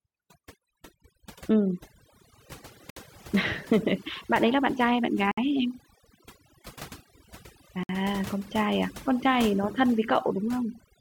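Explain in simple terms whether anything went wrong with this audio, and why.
Overdone noise removal runs through the whole clip. A noise reducer set too strongly switched off quiet frequency bands along with the hiss, leaving twinkling near-silence.

A gap at a join of encoded pieces appears at 2.90, 5.31 and 7.83 seconds. Each is a silence of about 60 milliseconds where separately encoded pieces were joined with their built-in padding silence left in.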